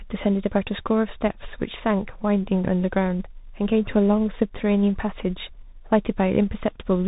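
From start to finish the speech carries tandem speech coding: it has passed through one speech coder after another, which fits a CVSD, G.711, CVSD chain. Nothing survives above 3.8 kHz, and the stacked granular roughness and noise, beyond what any single coder leaves, sets it apart from simple band-limiting.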